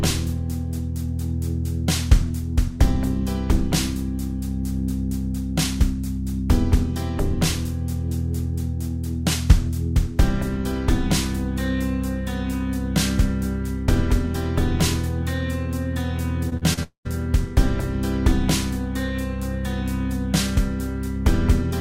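Around 16.5 s there's a cluster of short concealed packet loss: gaps at 16.49, 16.57 and 16.73 s, each 20 to 40 ms long. The receiver papered over each hole by extending the preceding sound and blending back, so you hear quick smears or wobbles.

Right after, from 16.83 to 17.07 s, comes what's most likely a long network dropout. About 220 ms went missing; the fill continues the last sound briefly, then fades, leaving roughly a tenth of a second of near-silence before the audio resumes further on.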